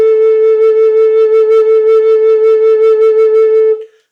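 A crackle rides on the loudest peaks of the music from start to finish, a grainy edge that comes and goes with the louder moments rather than a constant fuzz. This is hard clipping. The signal was pushed about 2 dB beyond what a stage in the chain could pass, so roughly a tenth of the waveform hits the ceiling and is sliced flat. Those squared-off tops add high harmonics that the original never had.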